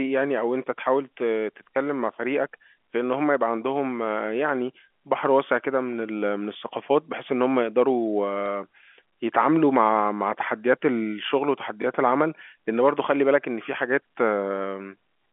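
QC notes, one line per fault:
8.46–8.48 s and 11.82–11.84 s, packet loss with last packet repeated: each time, 20 ms of audio, which fits a single lost packet, never arrived, and the receiver replayed the previous chunk. The repeat ignores the pitch cycle, so each repeat is heard as a small blip.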